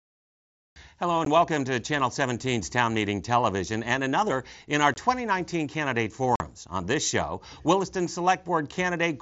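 At 1.25 s, 4.94 to 4.96 s and 6.36 to 6.40 s, the speech drops out in brief holes of 15, 22.5 and 45 ms, typical of unconcealed Bluetooth headset packet loss. Voice packets between headset and phone never arrived, and nothing filled the gaps. Each hole has abrupt edges. The waveform shows flat, squared-off gaps, and the spectrogram shows thin vertical blank columns. The mSBC wideband band limit near 8 kHz stays intact across the gaps.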